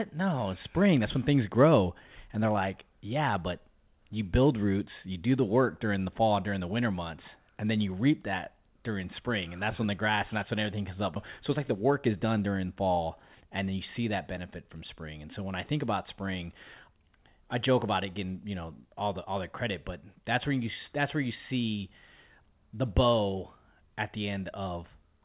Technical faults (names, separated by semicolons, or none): skip ahead; jitter buffer speed-up